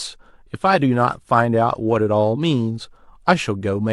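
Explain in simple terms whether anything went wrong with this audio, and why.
Nothing went wrong here: the speech comes across steady and intact, with no dropouts, glitches or odd noises to catch your ear at any point.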